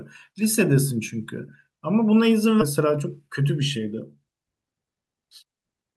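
At 2.61 to 2.63 s the speech jumps forward abruptly, with no pause or fill. About a second of speech is simply gone, and the audio on either side is butted together almost seamlessly. This is a skip ahead: audio that arrived late, or that overflowed the jitter buffer, was discarded while later audio was already queued. Playback resumed with the newer material, cutting the accumulated delay by roughly a second in one step.

From 2.79 s to 4.16 s the speech sounds hurried. It runs at about 109% of normal speed while the pitch stays unchanged. This is a jitter buffer speed-up. The buffer was holding more audio than its target, so the receiver repeatedly cut out tiny slices, each a pitch period or a few long. Together those cuts removed roughly 150 ms and brought the delay back down, which is what compresses the timing of this passage.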